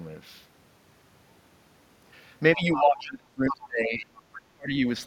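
From 2.56 to 4.24 s the speech is suppressed in double talk: for roughly one and a half seconds it dips in pieces, by up to about 30 dB, likely because the echo canceller could not separate the talker from the loudspeaker echo and attenuated both. Within that span the other side's voice is leaking through, from 2.6 to 2.82 s at about 10 dB below the speech, and from 2.99 to 3.1 s at about 25 dB down, likely because the canceller failed to remove it. A brief leak recurs from 4.33 to 4.39 s, again at about 25 dB down, likely the same residual echo. Between 4.53 and 4.85 s the speech is suppressed in double talk again, dropping by up to about 35 dB, likely the canceller muting the talker while the far end is active.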